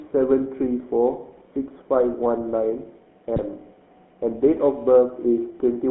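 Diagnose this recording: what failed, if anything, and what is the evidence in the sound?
GSM full-rate codec, throughout, codec stage: the sound has a buzzy, gravelly roughness and is band-limited to roughly 200 Hz to 3.5 kHz, which fits a 13 kbps full-rate coder driving a vocal-tract filter with sparse pulses.

GSM bit errors, 3.36 to 3.44 s, network stage: a short squawk and gargle occur as corrupted filter, pitch and gain values distort spectrum and level, which fits about four damaged frames.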